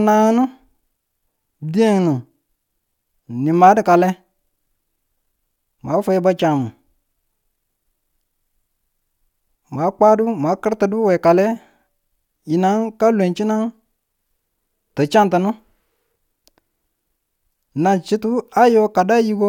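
No faults can be heard anywhere in this recording.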